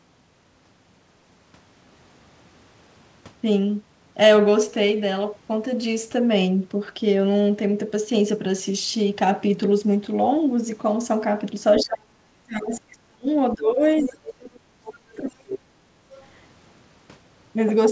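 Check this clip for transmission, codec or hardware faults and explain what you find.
Two echo-canceller faults appear in the last six seconds or so of the speech, on a band-limited call path with nothing above 8 kHz.

Other side's voice leaking through, 11.8–11.92 s, 14.04–14.12 s and 16.14–16.26 s: short scraps of a second voice, roughly 10 to 25 dB below the talker, likely loudspeaker echo the canceller missed.

Speech suppressed in double talk, 11.84–13.27 s, 13.55–13.81 s and 14.02–15.76 s: the talker dips sharply, by up to about 40 dB, likely as both sides overlap and get attenuated together.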